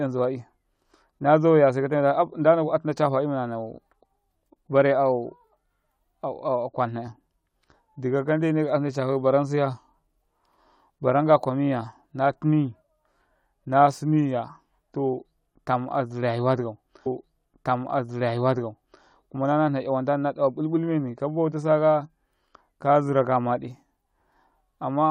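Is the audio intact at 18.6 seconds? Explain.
No. At 18.6 seconds the clip is inside a stream segment repeated fault running from 17.05 to 19.04 s. The player fetched or queued the same chunk of the stream twice, so about 1.98 s of speech plays a second time and the timeline runs that much longer. A small blip marks the jump back where the repeated segment begins, and the speech heard at 18.6 s is a replay of material already heard.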